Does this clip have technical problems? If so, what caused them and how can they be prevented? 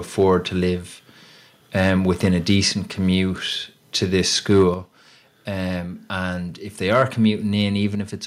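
Yes. Microphone overload occurs at 0.19–0.34, 1.77–1.90, 2.24–2.56 (just before "commute to this"), 4.50–4.63 and 6.92–7.03 s (just after "and if they"). Peaks exceed the converter's limit by about 1 to 3 dB. Their tops are flattened into a harsh crackle. The likely cause is input gain set too high. Lower the microphone level to prevent it.

Microphone volume stepped down at 4.74 s, just after "commute to this", by about 6 dB, and at 7.95 s by about 5 dB. The level drops abruptly each time, likely because the call software cut the input gain. Starting with a lower microphone level removes any need for these corrections.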